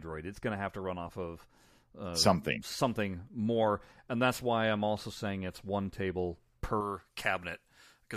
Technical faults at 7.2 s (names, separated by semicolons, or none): pre-emphasis left on